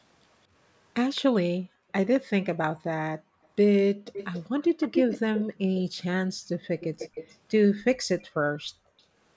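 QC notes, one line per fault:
1.15–1.21 s, echo leak: A very faint copy of the sound returns 214 ms later. It is brief and sits well under the direct sound. The likely cause is loudspeaker pickup that the far end's echo canceller missed and sent back.
1.57–1.92 s, background gated by the echo canceller: The room tone dips by up to about 40 dB for about 0.4 s in total. The canceller pulled the microphone down hard while the loudspeaker played, then let go.
2.14–2.46 s, echo leak: A faint repeat trails the sound by 214 ms, a little louder than before. It is likely residual loudspeaker echo that was not cancelled.
2.73–4.06 s, background gated by the echo canceller: The background drops out again by up to about 40 dB, for about half a second in total within this span. The microphone was clamped, then released.
4.13–5.43 s, echo leak: A clearly audible delayed copy, now 269 ms behind and only about 10 dB under the speech. 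It is likely uncancelled pickup returning over a slightly longer echo path.
5.45–6.49 s, background gated by the echo canceller: Room sound falls away by up to about 40 dB, for about 0.4 s in total, and returns when the canceller lets go.
6.61–7.36 s, echo leak: The delayed copy recurs at 269 ms, fairly clear, about 15 dB down. Its likely source is loudspeaker sound leaking past the canceller.
8.29–8.98 s, background gated by the echo canceller: A shallower dip of about 20 dB, lasting about half a second in total. The microphone was turned down less hard this time.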